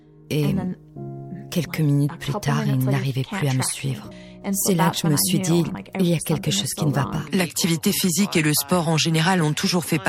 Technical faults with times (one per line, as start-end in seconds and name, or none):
4.11 compressed frames skipped
5.74 compressed frames skipped